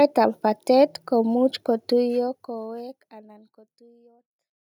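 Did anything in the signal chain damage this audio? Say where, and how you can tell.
No, nothing damaged it.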